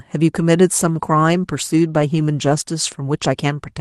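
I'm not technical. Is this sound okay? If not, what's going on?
No. From about 0.78 s to the end, there's a call bitrate drop: the connection squeezed the speech into far fewer bits, so it turns rougher and more muffled, with the crisp top end gone. It sits at its worst for about one and a half seconds.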